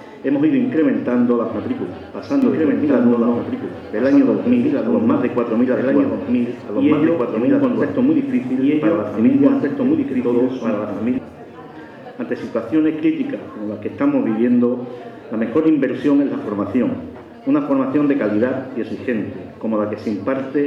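From 2.42 s to 11.18 s the sound is doubled: a second full-band copy runs about two seconds behind at roughly equal loudness, with no decay or room colour. It likely comes from a second, slower capture path. A spectrogram shows every pattern repeated two seconds later, and the waveform steps abruptly up and down where the copy starts and ends.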